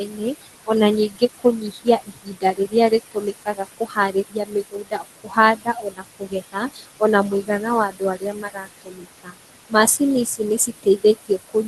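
Noise suppressor artifacts run through the whole clip. The suppressor pulls every band it judges to be steady noise down by about 17 dB. The room noise, only about 12 dB below the speech, drops away in the gaps and swells back under each phrase.

Speech cut by the noise suppressor occurs at 0.05 to 0.69 s (down about 18 dB), 1.09 to 7.49 s (about 22 dB), 7.89 to 9.35 s (about 20 dB), and from 9.7 s to the end (about 19 dB). The suppressor mistakes quieter speech for noise, so soft consonants and word endings sound swallowed and faint.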